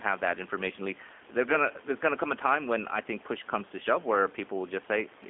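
Speech carried throughout by the G.729 codec, most likely its G.729A form at 8 kbit/s, rebuilt from a vocal tract filter, pitch predictor and sparse pulses, so it sounds plainly rough and synthetic. A spectrogram shows energy confined to 250 Hz–3.5 kHz, empty above.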